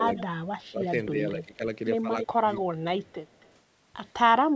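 A speech clip with two call faults. From 0.0 to 1.62 s the voice dips, by about 30 dB at worst, over roughly a second in pieces, and again by about 15 dB at 2.32 to 2.45 s. This is likely speech suppressed in double talk: the echo canceller ducks the near talker while the far side speaks. An echo leak follows a copy of the voice delayed by about 270 ms, at 0.16 to 0.22 s, 0.85 to 0.89 s, 2.19 to 2.61 s and 3.01 to 3.52 s, ranging from about 10 to 35 dB below the speech. The steady delay, rather than a smeared tail, suggests it is likely loudspeaker echo leaking past the canceller, not room reverberation.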